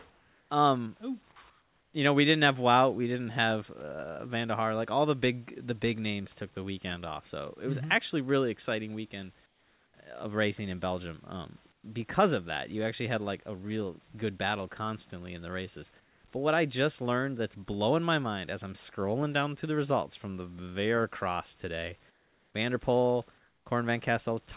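A speech clip in which the sender likely stopped transmitting during pauses and the receiver filled them with comfort noise in place of the background, at 0.1–0.5, 1.5–1.94, 9.46–9.94, 11.72–11.84, 16.0–16.24, 22.1–22.54 and 23.38–23.66 s. In each gap the real room noise gives way to a flat, featureless hiss, about 3 to 9 dB quieter, before the speech returns. The call path's band limit, with nothing above 4 kHz, is audible throughout.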